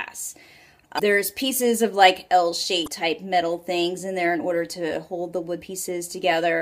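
At 0.96 to 1.00 s, 2.84 to 2.88 s and 5.58 to 5.62 s, the audio shows damaged data in a compressed stream. Each event lasts about 40 ms and sounds like a short chirp, squawk, click or hole. At each point, bytes in the compressed stream were corrupt, so the decoder could not read those frames correctly and lost sync. It searched for the next valid frame header before the sound resumed.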